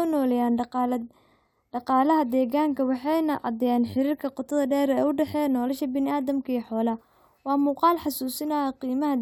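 No technical faults are audible.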